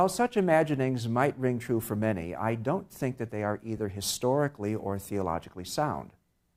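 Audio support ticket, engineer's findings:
Brief noisy smear at 3.77 s. Lost LE Audio frames: one 10 ms LC3 frame dropped over the Bluetooth link; decoder concealed it by repeating the previous spectrum with randomised signs, no fade needed. Lossy compression light.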